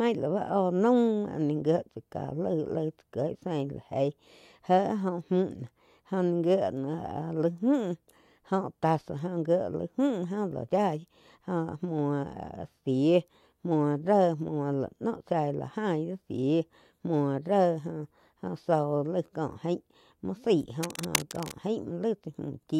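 From 20.83 s to 21.53 s, a burst of cable scratch noise cuts across the speech: dense, ragged scratching and rustling, only slightly quieter than the speech itself. The likely cause is a worn cable, plug or control being moved, its contact resistance fluctuating rapidly. Unlike steady hiss, it comes and goes in an uneven cluster lasting about 0.7 s. Unlike isolated clicks or dropouts, it is a continuous crackly texture rather than single ticks or gaps.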